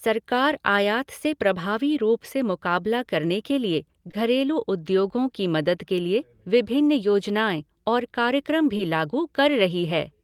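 Short concealed packet loss hits just after "मुकाबला करने के लिए", from 4.07 to 4.11 s and again from 4.11 to 4.15 s, before "उद्योगो की मदद के". A third gap follows "विभिन्न योजनाएं और कार्यक्रम", at 8.77 to 8.81 s. Each time, about 20 ms of speech failed to arrive, which points to a single lost packet. The decoder extended the preceding sound and blended back in. The back-to-back pair at 4.1 s makes a brief smear.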